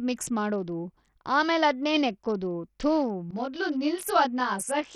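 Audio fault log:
throughout, Bluetooth SBC compression: the speech sounds dull and gritty, with the top end thinning out and flickering and a rough grain riding on the sound. The likely cause is heavy SBC coding at a bitrate that sounds like roughly 64 kbps, starving the upper sub-bands of bits and coarsely quantising the rest.
3.31 to 4.95 s, channel delay (comb filtering): right after "ಮಾಡೋದು ಆಮೇಲದ್ನೇ ನೆಕ್ಕೋದು ಥು" the speech turns rough and slightly doubled until the end. One channel trails the other by about 20 ms, so summing them to mono cancels evenly spaced frequencies, with the first notch near 30 Hz.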